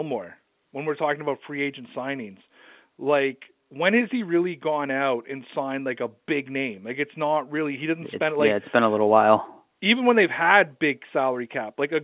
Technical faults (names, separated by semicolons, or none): none